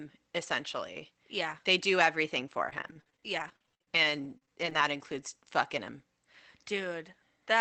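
Repeated packet loss (robotic sound) runs from 2.65 to 4.77 s, starting just after "do everything". More than a dozen short holes, the longest 54 ms, are each patched by stretching the preceding sound, so roughly a fifth of the stretch is rebuilt. This gives choppy, robotic audio with fragments missing.

A jitter buffer slow-down overlaps it from 3.89 to 4.97 s, ending just before "fucking him". To rebuild its reserve, the receiver repeated pitch periods and pause fragments, adding 42 ms and playing at 97% speed. Sounds are drawn out at unchanged pitch.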